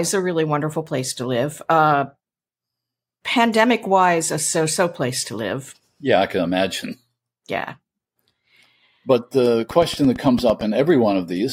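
A speech recording, and the thing that jumps out is a train of clicks near the end, from 9.71 to 10.62 s. It's a steady ticking, evenly spaced at about 8.9 clicks per second, so roughly ten pops in under a second, each much the same shape and poking up about 5 dB above the speech. That regular, repeated pulse most likely comes from electrical interference from nearby gear or a faulty connection or power supply.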